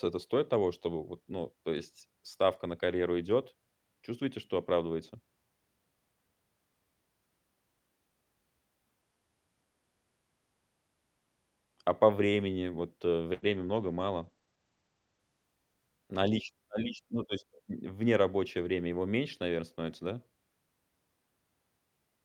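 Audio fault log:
13.45–16.51 s: call bitrate drop, coding falls from 32 to 13 kbps, top band shrinks from 20 kHz to 8 kHz, so speech turns muffled and coarse before "на лич ну то"; spectrogram shows upper energy cut flat.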